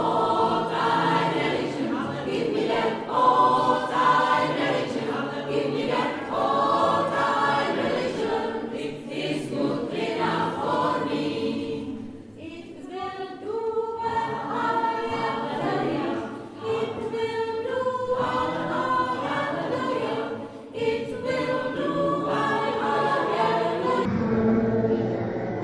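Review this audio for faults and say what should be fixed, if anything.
From 24.05 to 25.63 s, a wrong sample rate plays the samples at half their recorded rate without conversion, so the sound slows to half speed and drops a full octave. To prevent it, read the file's true sample rate and resample to the output device's rate before playback.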